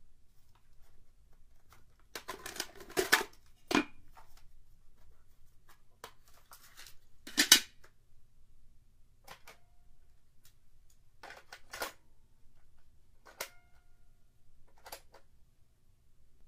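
The clip is a recording of sounds, and no technical fault can be heard anywhere in it. Nothing in the audio calls for a time or a cause to be pointed out.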